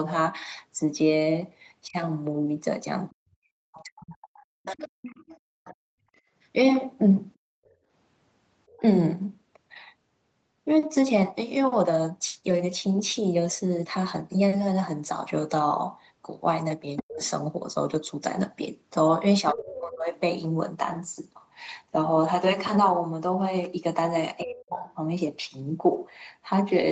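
A speech recording over a call line, with three echo-canceller problems. At 1.87 to 4.82 s, 17.02 to 20.12 s and 24.43 to 24.84 s the talker's speech dips, at worst by around 25 to 40 dB, in patches adding up to over a second. That's likely speech suppressed in double talk: the canceller couldn't tell the talker from the far end and pulled everything down. The other side's voice leaking through is audible from 3.75 to 8.81 s and again from 16.96 to 19.73 s, a second voice roughly 10 to 15 dB under the talker, probably the loudspeaker signal the canceller didn't fully strip out. Between 5.94 and 7.9 s the room sound drops by about 37 dB for short stretches totalling under a second. That's the background gated by the echo canceller, clamping the mic while the loudspeaker plays. Nothing comes through above 8 kHz, which is the band limit of the call path.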